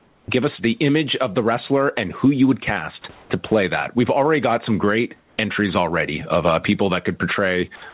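Throughout the clip, the input gain is likely set far too high, with a fast limiter clamping it on each loud syllable. The result is gain pumping: the level swings by about 15 dB, and the speech sounds squashed and flattened in dynamics.

From 0.00 to 0.28 s, the sender likely stopped transmitting during the opening pause and the receiver filled those 280 ms with comfort noise in place of the background. The real room background gives way to a smooth, featureless hiss about 3 dB quieter.

From 3.02 to 3.04 s, the sender's voice detector likely misjudged part of the speech as background, dropping 20 ms of sound. A brief patch of steady synthetic noise replaces it, heard as a tiny hole in the speech before it resumes.

Comfort noise replaces the background again from 3.12 to 3.30 s, for 180 ms at about the same level, and from 5.18 to 5.38 s, for 200 ms, about 4 dB quieter. Each pause turns briefly uniform and lifeless.

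From 7.76 to 7.82 s, the voice detector likely drops 60 ms of sound near the end, substituting steady noise, so that bit of sound is lost under a flat hiss.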